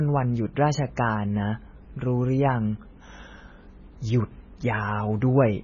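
From start to finish the speech sounds dull and watery, with a swirling, warbling texture, and nothing is present above 7 kHz, so the top end is cut off flat. This is heavy damage that is likely from MP3 compression at a very low rate, consistent with about 16 kbps. Short of bits, the encoder chops off the treble and drops quiet frequency components that flicker in and out between frames, which produces the swirl and smeared onsets.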